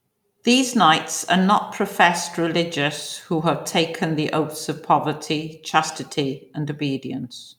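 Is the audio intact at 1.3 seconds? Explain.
Yes, at 1.3 seconds the speech plays through intact, with no dropout, click, distortion or other fault at that point.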